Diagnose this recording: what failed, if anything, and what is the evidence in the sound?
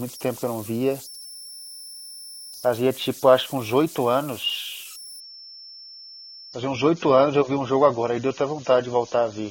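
Two things went wrong here. First, at the converter there's a whistle somewhere around 5 kHz running through the whole recording, sitting about 19 dB below the speech, clearest in the pauses and turning grainy under the speech. That's converter idle tones: a delta-sigma converter running without dither settles into repeating bit patterns on low-level input, and those patterns come out as a steady tone instead of noise.

Second, from 5.20 s right to the end at 9.50 s the quality drops in one step with no gap. Everything above 6.9 kHz is gone. That's the adaptive stream at a lower bitrate, a network-and-codec issue. The connection slowed and the player switched to a leaner AAC-LC rendition, which fits a drop from something like 96 kbit/s down to around 24 kbit/s.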